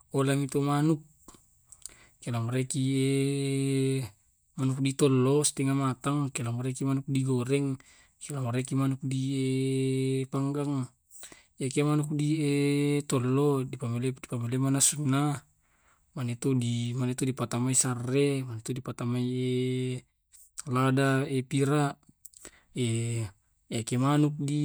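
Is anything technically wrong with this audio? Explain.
No, nothing is technically wrong with this speech recording. Listening through it, no technical fault turns up at any point.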